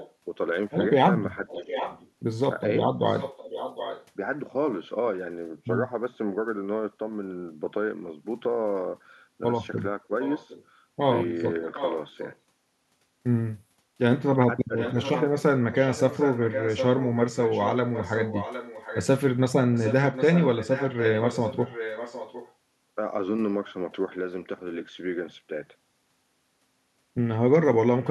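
Right from the start, 0 to 4.06 s, there's an echo leak: a delayed copy of the speech trailing about 757 ms behind, sitting around 10 dB under the direct sound. It's likely a far-end speakerphone whose echo canceller didn't fully scrub what its mic picked up from the loudspeaker, so that leftover came back down the line. In the middle of that, at 1.62 to 1.72 s, the speech dips by a few dB for about a tenth of a second. That's speech suppressed in double talk, with both ends active at once, and the likely culprit is the canceller failing to tell the talker from the echo and turning everything down. The echo leak returns from 10.22 to 12.36 s and again, longer, from 14.19 to 22.53 s, with the same 757 ms lag and about the same level. Inside that second stretch, at 14.68 to 14.72 s, there's another double-talk dip, brief but deeper, around 10 dB. Right at the end, 28.01 to 28.09 s, a last faint scrap of echo slips through, roughly 20 dB down.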